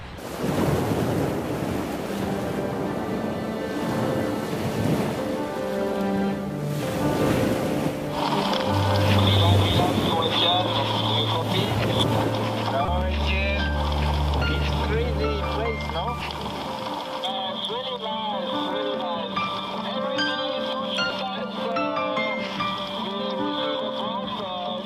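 Damaged data in the compressed stream produces three brief blips, at 12.85 to 12.88 s, 16.18 to 16.21 s and 21.07 to 21.11 s, each about 36 ms. At each point the decoder reads corrupted frames, loses sync and has to find the next frame header.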